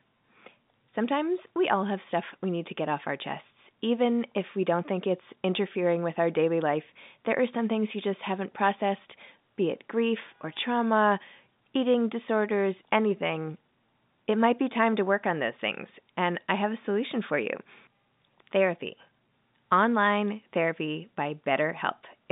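No technical faults can be heard anywhere in this recording.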